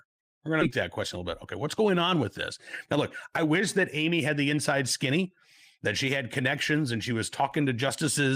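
At 0.61 s a skip ahead drops roughly half a second of speech, so the audio jumps straight into "that question a little"; the waveform shows an abrupt join with no gap. From 1.57 to 2.23 s, and again from 2.97 to 5.25 s before "that she had", jitter buffer speed-up trims pitch periods, running about 6 and 7% fast at unchanged pitch, removing roughly 50 and 150 ms. The spectrogram shows compressed syllables with harmonic spacing unchanged.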